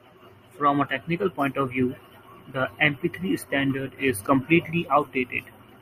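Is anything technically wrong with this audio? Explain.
Yes. At 4.27 s there is a gap at a join of encoded pieces. Separately encoded segments were spliced without trimming their encoder delay and padding, so the speech drops into a brief gap of about 8.4 ms before continuing where it left off.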